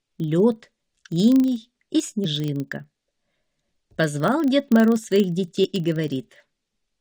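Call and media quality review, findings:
Filter restarted on every block, throughout. Steady 25 Hz buzz of ticks riding on the audio, louder where the signal is louder. Probable component: block-based filter stage losing its state and starting each block from silence. Pattern fits 40 ms processing blocks.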